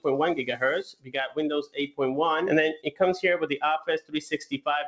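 The sound pumps and thins throughout, with held or fading parts sinking by around 15 dB while attacks come through. This is a speech noise suppressor left on for non-speech audio, treating steady tones and tails as noise. It cuts hardest from 0.9 to 1.38 s (down about 18 dB), 1.63 to 2.0 s (about 19 dB), 2.76 to 3.0 s (about 16 dB) and 4.43 to 4.67 s (about 19 dB). These are clear cases of sound cut by the noise suppressor. Nothing reaches above 8 kHz, which fits a G.722 call path.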